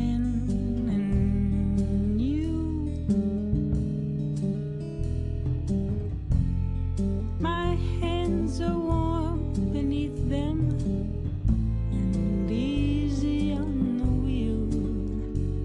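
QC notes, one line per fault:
Nothing stood out on a careful listen to the audio.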